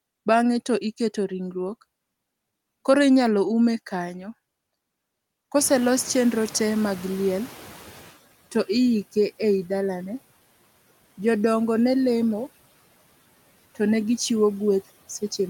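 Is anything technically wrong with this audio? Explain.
Yes, there is one fault. Noise suppressor catching up, from 5.58 to 8.15 s: the room noise jumps by about 23 dB at around 5.5 s, and the suppressor's estimate of the background still reflects the quieter level before it. For roughly 2.6 s the new noise passes with too little reduction, audible as noise under the speech. It then sinks by about 10 dB as the estimate catches up.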